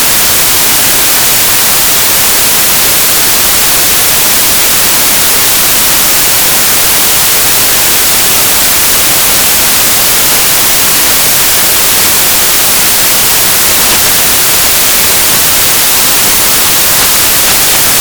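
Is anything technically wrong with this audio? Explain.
Yes, the samples are built from the wrong bytes, and it runs from start to finish. Whatever read this audio stitched each sample's bytes together wrongly, whether off by one byte or in swapped order, so the quick-changing low bits end up as the biggest part of every value. What you get is loud, harsh broadband noise over the whole thing, close to white noise on the loud passages.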